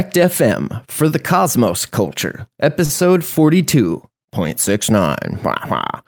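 Speech, with a short stall from a late packet around 2.85 to 2.92 s: the jitter buffer ran dry and about 41 ms of sound got stretched, nothing lost, just pushed later.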